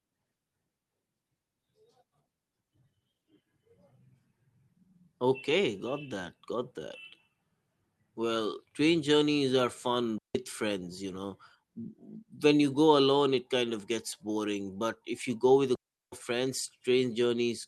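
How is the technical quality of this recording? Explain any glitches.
The recording has two digital wireless dropouts. The first runs from 10.18 to 10.35 s, a 168 ms hole between "train journeys are" and "friends you know"; the second, from 15.75 to 16.12 s after "you go with a", lasts 370 ms. Each time the receiver lost too much data and muted itself with a very quick fade, leaving clean near silence. Unlike an analogue wireless dropout, there is no hiss or noise burst at either edge.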